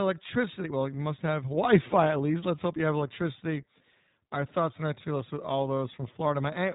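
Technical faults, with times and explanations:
Throughout, iLBC codec: the speech has passed through a narrowband VoIP coder that codes each 20 ms frame's excitation independently of the previous one, which fits iLBC's 15.2 kbps mode. The band is cut off near 3.8 kHz, so the upper part of sibilants and breathiness is lost and the speech sounds muffled and telephone-like. The coarse per-frame excitation coding gives a plainly audible rough, slightly synthetic quality to the speech.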